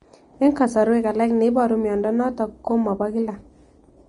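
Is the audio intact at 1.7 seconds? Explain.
No. At 1.7 s the speech carries the same damage heard across the whole clip, which is most likely Vorbis compression. Nothing reaches above about 10.6 kHz, and the remaining upper band is hissy and grainy, with attacks blurred. The encoder appears to have cut the treble and quantised what was left so coarsely that fine detail turned into noise of similar energy, which fits a low rate around 32 kbps.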